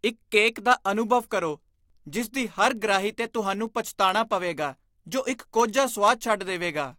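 From 0.12 s to the end at 6.98 s, the speech carries word clock ticks. About a hundred clicks arrive at a steady rate, roughly every 70 ms. The receiving device runs on its own clock, not locked to the sender's digital link. The two clocks drift apart by a few hundred parts per million. Each time they slip past each other, one sample is dropped or repeated. That produces a tick.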